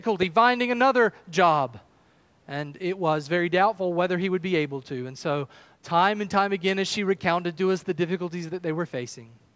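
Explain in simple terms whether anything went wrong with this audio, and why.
Nothing went wrong here: the speech just sounds like it came through a call microphone, which trims the deepest bass and tops out around 8 kHz, and that's perfectly normal for a call.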